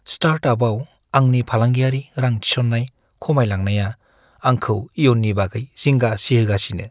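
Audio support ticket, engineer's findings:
No faults found in this speech.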